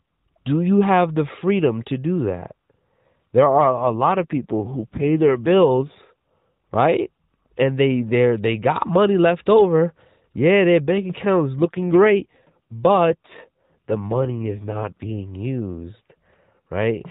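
Speech heard through a narrowband AMR mobile channel, cut off above 4 kHz, turns rougher and more synthetic from 3.58 to 5.99 s and again from 11.59 to 15.21 s, just after "their bank account is", with no gap and no change in bandwidth. This is an AMR rate drop, with the sound pointing to a fall from 12.2 to 5.9 kbps. The network moves the codec to a lower rate and uses the freed bits for error protection, so each passage carries fewer pulses per frame until the rate returns.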